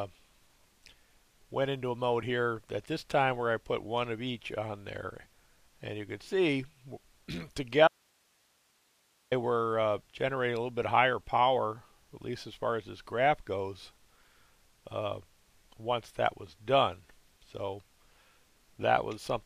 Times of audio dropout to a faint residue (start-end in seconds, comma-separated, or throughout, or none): 7.88-9.31